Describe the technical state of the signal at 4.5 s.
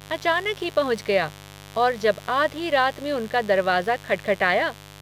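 At 4.5 s the speech carries mains buzz, present throughout: switching spikes twice per 50 Hz cycle give a raspy, kilohertz-rich rasp, not a smooth low hum, roughly 20 dB down.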